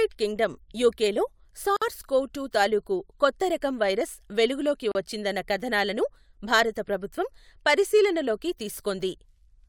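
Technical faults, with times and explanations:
1.77–1.82 s and 4.92–4.95 s, gap at a join of encoded pieces: speech stops dead for 51 ms after "కింగ్ డమ్ యుకెలో" and about 35 ms after "రకం వైరస్ వెలుగు లోకి", then resumes where it stopped. Separately encoded pieces were joined with their encoder start delay and final-frame padding left in. The waveform shows flat near-zero stretches with smeared edges, and the spectrogram shows thin vertical blank bands.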